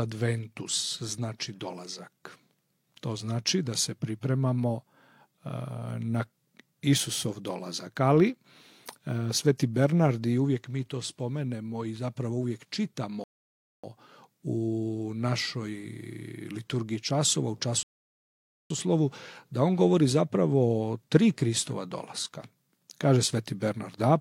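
The audio drops to silence twice and then picks up exactly where it left off: from 13.24 to 13.84 s, adding 0.6 s, and from 17.83 to 18.70 s, adding 0.87 s. These are rebuffering stalls, where playback ran out of downloaded data and paused until more arrived, delaying the audio without losing any.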